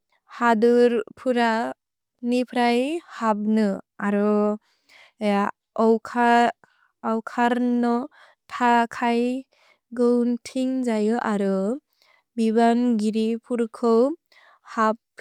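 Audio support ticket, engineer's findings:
Listened through the speech recording and found nothing that needs fixing, so there's no component to chase on this ticket.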